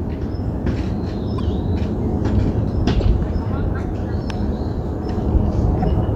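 A broken MP3 bit reservoir is the likely cause of three brief glitches, at 1.37 to 1.40 s, 2.99 to 3.02 s and 5.81 to 5.85 s. Each lasts about 30 ms, roughly one 26.1 ms frame, and the sound jumps abruptly past a short stretch. After frames are dropped, the next frame reaches back into the reservoir for data that now belongs to a different frame. Its decoded output is corrupted, and the playback skips.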